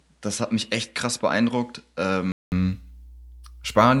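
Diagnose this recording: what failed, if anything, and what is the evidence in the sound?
Mains hum from the analogue wiring: a steady 60 Hz tone sits roughly 25 dB below the speech throughout. Its fixed pitch and constant level set it apart from broadband hiss.

Input switched to a poorer device at the driver stage: up to 2.52 s the sound is duller and a few dB quieter, with nothing above 11.4 kHz. A 200 ms silence follows before full bandwidth returns, likely from a changed microphone rather than a codec filter.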